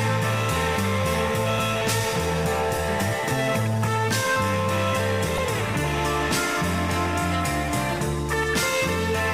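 At 1.56 to 1.59 s and 5.34 to 5.39 s, brief glitches break through. This is damaged data in a compressed stream: corrupted frames throw the decoder out of sync.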